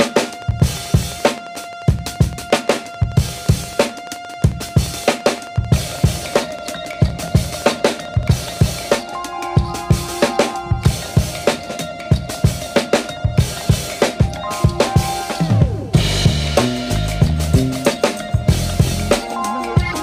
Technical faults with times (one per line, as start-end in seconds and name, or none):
0.07-8.58 train of clicks